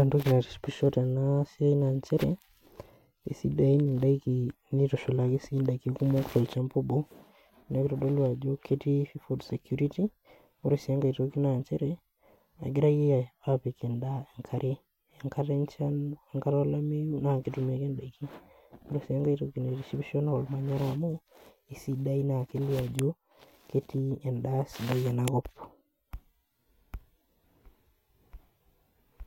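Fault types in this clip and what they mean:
File header played as audio: two sharp, loud snaps at about 22.99 s and 25.28 s, each only a millisecond or so long, where a new piece of the speech stream begins and its few dozen header bytes are read as sample values. Unlike a dropout click, there is no gap or missing sound around them, and unlike a splice discontinuity their loudness doesn't depend on the waveform; they land hard regardless of what the speech is doing.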